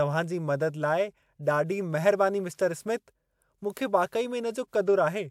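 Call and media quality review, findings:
No technical faults found: the speech signal stays continuous and stable throughout, with nothing in the audio pointing to a problem in capture, processing or transport.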